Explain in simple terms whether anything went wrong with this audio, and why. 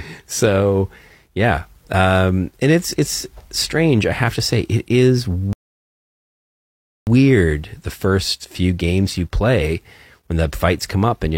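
The player ran out of downloaded audio at 5.53 seconds and had to wait for more, a rebuffering stall. The speech drops to silence until 7.07 seconds, then picks up exactly where it stopped, so nothing is missing, but about 1.5 seconds of dead air is added.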